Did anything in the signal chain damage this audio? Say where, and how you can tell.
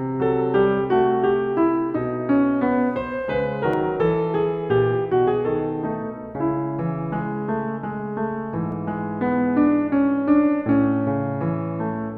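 Yes. The music skips about 15 ms at 3.74 and 8.72 s, 5 s apart, with no silence: likely audio missing between chunks in the buffer stage.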